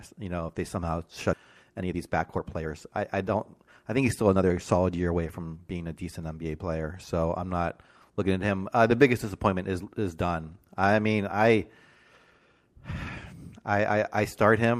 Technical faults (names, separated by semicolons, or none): jitter buffer speed-up